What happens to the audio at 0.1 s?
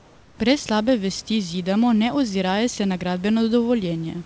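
Comfort noise in place of the background covers the opening stretch from 0.0 to 0.38 s, so at 0.1 s the room sound has been swapped for a smooth, featureless hiss about 3 dB quieter than the real background, which sits about 30 dB below the loud parts. The likely cause is discontinuous transmission: the sender goes silent while no speech is detected, and the receiver generates shaped noise to fill the gap, capped like everything else on this G.722 path at 8 kHz.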